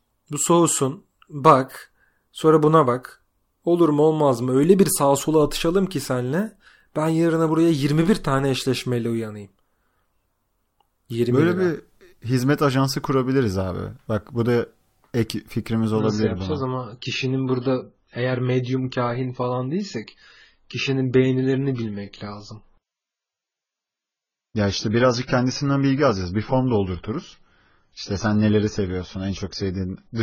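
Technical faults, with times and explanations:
15.99–30.22 s, adaptive stream at a lower bitrate: right after "bu da ek fikrimiz" the sound turns dull and artefact-laden with no gap, nothing above 7 kHz. It sounds like the player fell from roughly 96 kbit/s AAC to about 16 kbit/s when the connection slowed.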